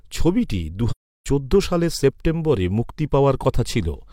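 A speech clip with one AAC frame loss with muting: from 0.91 s to 1.26 s the sound fades out to silence and back in with soft edges, just before "চোদ্দ সালের সেপ্টেম্বরে মুক্তি". The roughly 0.34 s hole fits about eight dropped frames that the decoder zeroed.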